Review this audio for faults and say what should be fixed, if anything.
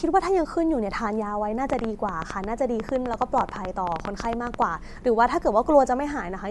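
The speech has a breathy, grainy edge from start to finish. Nothing is present above 11.5 kHz. The damage is plainly audible. This is likely Bluetooth LC3 compression. The codec works on short frames, which fits 10 ms frames. At a rate that fits about 48 kbps, it drops much of the upper spectrum and replaces it with shaped noise. That noise fill is the source of the grain. To prevent it, record over a wired path, or use a higher LC3 bitrate.

A train of clicks runs from 1.70 s to 4.63 s. There are about thirty clicks, at around 10.3 per second. The spacing is irregular. The peaks stand roughly 15 dB above the speech, so they are heard as popping over the words and in the pauses. The cause is likely electrical interference or a faulty connection or power supply, injecting similar pulses again and again. To prevent it, move away from nearby equipment and check the cables and audio interface.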